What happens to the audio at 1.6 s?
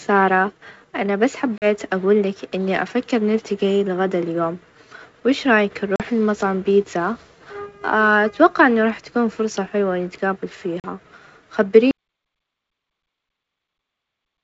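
At 1.58 to 1.66 s, packet loss on an ADPCM call drops about 40 ms of audio, around two packets, filled with silence. The decoder's predictor and step size then lose sync with the sender's, so the speech breaks off abruptly and resumes with a brief, slightly distorted onset.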